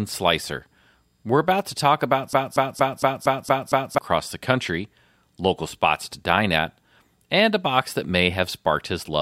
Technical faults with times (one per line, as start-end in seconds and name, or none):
2.33-3.98 broken-record loop